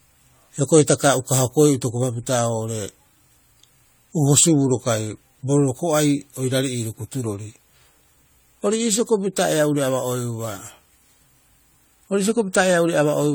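Throughout the speech there is generation loss: a swirly, hollow texture with smeared consonant attacks, worse than a single pass near 64 kbit/s AAC would leave. It is likely from around five repeated lossy encodes, each compounding quantisation noise and spectral holes, with nothing above 20 kHz.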